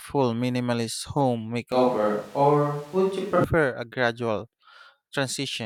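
From 1.72 to 3.44 s the speech turns roomy, hollow and thin at the same loudness, with faint room noise. This is likely a switch to a distant microphone.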